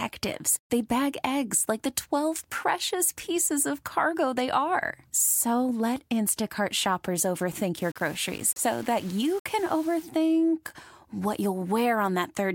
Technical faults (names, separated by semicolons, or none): low bit depth without dither